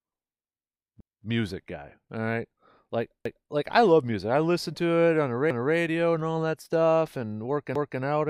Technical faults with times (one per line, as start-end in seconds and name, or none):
1.00-1.25 overlapping chunks
3.25-3.50 overlapping chunks
5.50-5.75 overlapping chunks
7.75-8.00 overlapping chunks